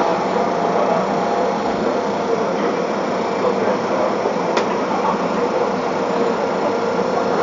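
No technical faults can be heard anywhere in this recording of sounds. Nothing in it calls for comment.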